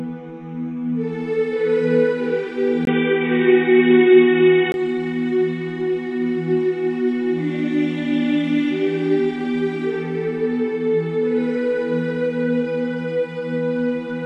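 At 2.85 s the sound drops out for about 20 ms, then returns dull and boxy. Nothing above 3.8 kHz gets through, so the top end is gone. The level shifts by about 5 dB, and a faint new background noise sits well below the signal. The likely cause is an input switched to a poorer device, a narrower-band microphone with its own tone and noise floor. At 4.74 s the original brightness returns.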